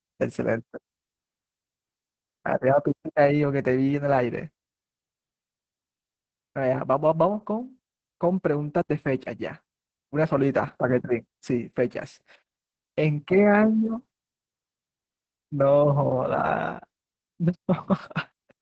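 A speech clip with Opus voice compression from start to finish. Nothing is heard above 8.4 kHz. The speech sounds muffled, hoarse and slightly robotic. The linear-prediction coder is clearly starved, which fits a bitrate near 10 kbps with coarsely coded excitation.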